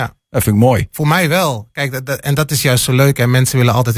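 No technical faults are audible.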